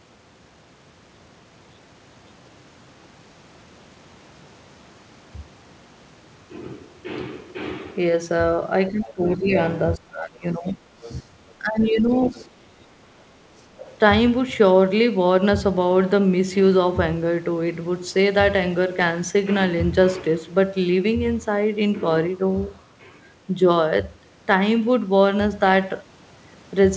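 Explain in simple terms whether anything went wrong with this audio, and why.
Between 8.89 and 9.53 s, 9.96 and 10.8 s, 11.22 and 12.35 s, 12.66 and 12.77 s, and 13.71 and 13.79 s, the talker's speech dips sharply or breaks up. This is speech suppressed in double talk, likely from the echo canceller turning everything down while both sides spoke.

Faint scraps of another voice come through at 10.67 to 11.53 s, 12.12 to 12.48 s and 13.57 to 13.94 s. This is the other side's voice leaking through: likely loudspeaker sound the echo canceller didn't fully remove from the microphone.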